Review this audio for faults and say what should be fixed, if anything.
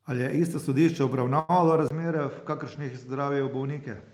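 At 1.39 to 1.51 s a sound in the speech is held unnaturally long, for about 95 ms, with a slight buzz or dip before the speech picks up where it left off. This is a short stall from a late packet: the jitter buffer ran empty, so the receiver stretched the last audio until the packet arrived. Nothing is lost, but everything after is about 95 ms later. A deeper or adaptive jitter buffer would prevent it.

From 1.88 s to the end, after a 20 ms gap, the speech turns duller and a little quieter. Nothing remains above 7.6 kHz, and a faint new background noise sits well below the speech. The likely cause is the input switching to a poorer device, such as a headset's call profile or another microphone with a narrower band and its own tone and noise. Locking the input device for the whole recording would prevent the switch.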